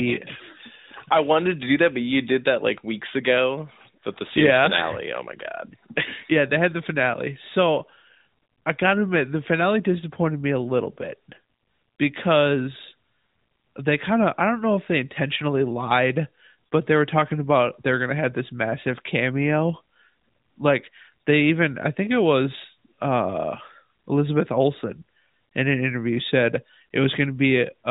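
No technical faults are present.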